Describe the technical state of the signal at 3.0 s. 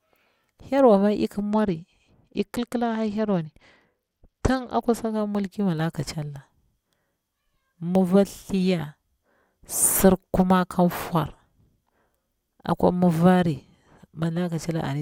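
At 3.0 s you're inside a Bluetooth SBC bit pool drop, from 1.52 to 5.15 s, after "ma ik". Starved top sub-bands dull the treble and coarsely quantised lower bands add grit, consistent with a bit pool falling from 28 to 11.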